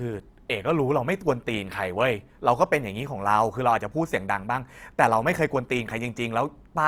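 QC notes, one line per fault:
Throughout, Opus compression: the speech sounds grainy and rough, with noise-filled upper bands rather than spectral holes, while content still reaches about 20.2 kHz. This points to likely Opus music-mode coding, consistent with a rate near 24 kbps.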